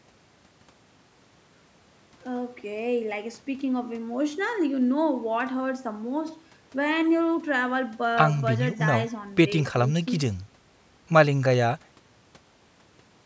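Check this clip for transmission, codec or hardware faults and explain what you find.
No faults found in this clip.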